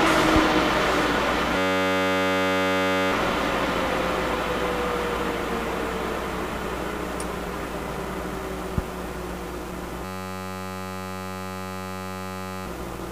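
From 1.58 to 3.12 s and again from 10.05 to 12.66 s, a system hang loop repeats one 10.67 ms fragment, fitting a 512-sample buffer, as a steady 93.8 Hz buzz.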